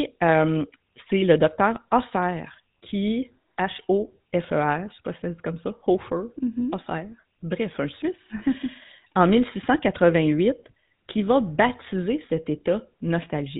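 Throughout, the speech has gone through the GSM full-rate codec, which fits a 13 kbps rate. It models the vocal tract, drives it with a sparse pulse train, and discards everything above 4 kHz, leaving a plainly audible buzzy, gravelly roughness.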